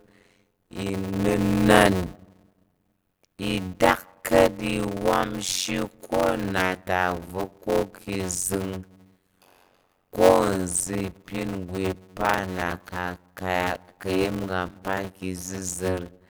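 From start to finish there's a block size mismatch (padded): each block written is shorter than what the next stage reads, which fits 256-sample blocks, and the leftover is filled with zeros. That drops a tiny gap into every block, so you get a steady buzz at about 91.9 Hz riding under the speech. The padding also stretches everything out. The speech plays at 0.533 times its normal speed, but the timbre stays the same.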